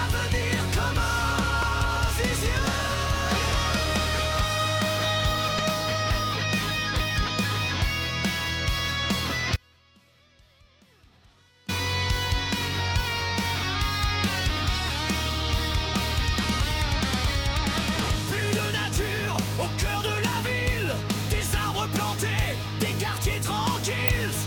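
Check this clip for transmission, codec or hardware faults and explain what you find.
Two kinds of fault are present: three short bursts of damaged data in the compressed stream and one longer dropout to a faint residue.

Damaged data in a compressed stream: brief chirps or blips at 1.62 s and 5.58 s, and another from 24.08 to 24.10 s. Corrupted bytes make the decoder misread those frames, lose sync and jump to the next valid frame header, producing each glitch.

Audio dropout to a faint residue: from 9.56 to 11.68 s the sound cuts out abruptly for about 2.1 s, leaving only faint sound roughly 30 dB below normal before snapping back. The likely cause is the wanted signal being lost upstream while the downstream path stayed live.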